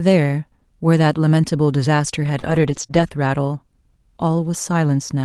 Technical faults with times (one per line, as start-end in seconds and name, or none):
2.39-2.45 short concealed packet loss
2.43-3.09 lost packet rebuilt from error correction
2.87-2.91 short concealed packet loss